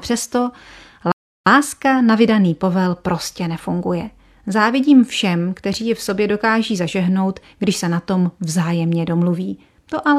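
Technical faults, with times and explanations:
1.12 to 1.46 s, rebuffering stall: the speech drops to silence for about 0.35 s, then resumes exactly where it stopped with "na vydaný povel prostě", because the player ran out of downloaded audio.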